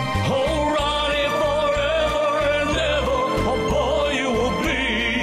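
No technical fault can be heard anywhere in the audio, with the signal continuous and stable throughout.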